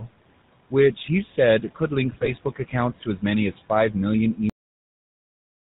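A noise suppressor runs throughout, cutting the background by about 18 dB wherever it judges a band to hold only steady noise. The room noise, which sits about 19 dB below the speech, drops away in the gaps and swells back under each phrase.

The whole clip has also passed through the GSM full-rate codec, which fits a 13 kbps link. The codec rebuilds speech from a vocal-tract filter excited by evenly spaced pulses, with only every third excitation sample kept, and nothing above 4 kHz survives. The damage is plainly audible: a buzzy, gravelly roughness runs through the speech, and the top end is dull.

From 2.10 to 2.33 s, GSM bit errors reach the decoder, at a rate that points to nearly 2 percent. Flipped bits in the filter, pitch and gain parameters bend the spectral shape and throw the level around. Over a stretch that fits roughly eleven 20 ms frames, the speech breaks into squawks, pops and a gargling smear before the decoder settles again.

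At 4.50 s the audio ends abruptly, a cut-off end. The final buffers were never written out, so the sound stops mid-utterance and falls straight to digital silence with no natural decay. That silence runs for the last second or so of the file.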